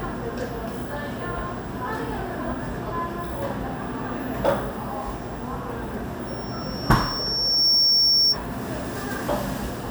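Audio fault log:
6.27–8.39 s, loudspeaker feedback squeal: a microphone is picking up the loudspeaker it drives, and at 5.5 kHz the gain around that loop rises above one, so the tone feeds on itself. It swells over roughly a second and a half into a piercing high whistle that ends up about 10 dB louder than the surrounding sound. It continues until it stops at 8.39 s.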